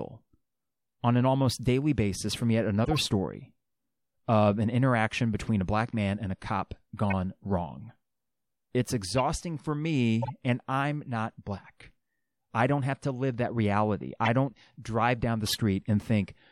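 Compressed speech frames arrived with flipped bits and the decoder played them anyway: a corrupt frame decoded at 2.85–2.98 s after "daily basis from yet", 7.10–7.13 s, 9.18–9.20 s, 10.22–10.30 s before "and I'm not black", 14.24–14.28 s, and 15.46–15.57 s after "don't drive down the". Misread gains and codes put energy at the wrong frequencies, giving short chirps and noise bursts that peak near -20 dBFS, loudest at the last two.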